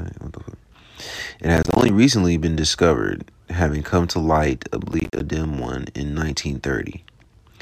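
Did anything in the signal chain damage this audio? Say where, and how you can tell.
Yes: processor overload crackle at 1.57–1.89 s, before "recently been discovered having", and 4.90–5.20 s, before "dim one in". The driver buffers repeatedly missed their deadlines, leaving hard-edged silent gaps consistent with roughly 10 ms buffers.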